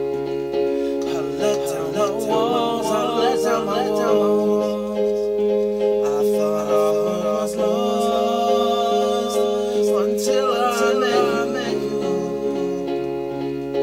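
From start to finish the sound carries a doubled audio track: a second full-band copy trails the original by roughly half a second, sitting a few decibels lower, about 5 dB down. It adds no reverberant tail or room colouring, just a clean, flat repeat. The likely cause is the same signal being captured again through a slower path. On a waveform each onset reappears as a smaller twin; a spectrogram shows every event repeated, shifted right by that fixed gap.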